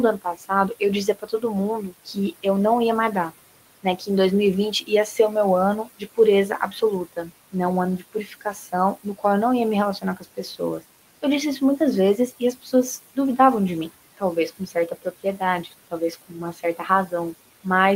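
Noise suppressor artifacts run through the whole clip: the room noise, sitting about 18 dB below the speech, is pulled down by about 17 dB in pauses and returns under speech. Speech cut by the noise suppressor occurs at 0.18–2.45 s, 3.3–4.09 s after "não ia mais", 4.72–5.19 s, 5.84–9.24 s after "o meu", 10.01–13.17 s before "de mim", and 14.17–17.65 s. In each span, quiet speech is mistaken for noise and lowered by up to about 13 to 18 dB, so endings and soft consonants sound swallowed.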